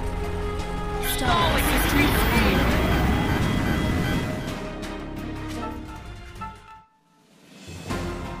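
Nothing in the audio stands out as a technical fault at any point; it just runs along without a hitch.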